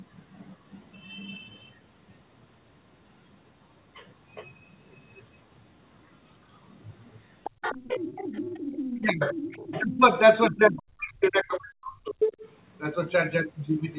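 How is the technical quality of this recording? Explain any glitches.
Quality is marred by echo trouble in the second half, where a second voice bleeds in and the main speech repeatedly ducks, all heard through a narrowband call path with nothing above 4 kHz.

Other side's voice leaking through, at 7.44–9.06 s, 9.22–9.82 s, 10.76–10.82 s and 12.21–12.36 s: a second voice sits under the speech, from roughly 25 dB down to nearly level with it near 12.3 s. The likely cause is loudspeaker echo that the echo canceller left in the microphone signal.

Speech suppressed in double talk, at 9.0–9.21 s, 9.81–10.02 s and 10.5–12.22 s: the speech dips sharply, by around 25 dB in the short gaps and up to about 40 dB over most of the last stretch. It likely happens because the canceller, facing both sides talking at once, turned everything down.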